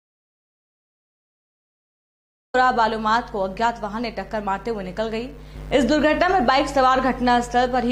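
The clip opens in dead silence: from the very start until 2.54 s there is nothing at all, not even room tone, and the sound then arrives abruptly in mid-flow rather than fading or starting cleanly. This is an audio dropout to silence already under way when the clip begins. The likely cause is a lost input, such as a disconnected device, a broken link or an accidental mute, while the recorder kept writing silence, so whatever happened in those first seconds is gone.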